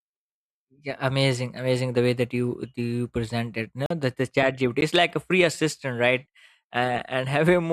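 At 3.86 s the speech drops into a block of digital silence lasting about 43 ms, which fits a 2048-sample buffer left unfilled. The cut has no fade. At 4.81 s a 12 ms gap follows, heard as a tick or dip.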